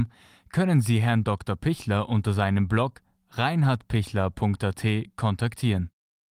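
Speech, with no audible faults.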